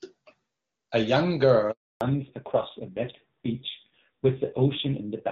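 At 1.71 s the speech cuts out in a handover gap. The call switched networks and no speech frames got through. The sound dies within a few tens of milliseconds. Silence lasts 300 ms, until 2.01 s, and whatever was said then is gone.

From 2.01 s to the end comes a fallback to narrowband. Before the gap, the speech is clear and full, as HD Voice at a high rate should be. Afterwards nothing remains above 4 kHz. The speech turns dull and rough, which points to a low-rate narrowband codec, around 5.9 kbit/s.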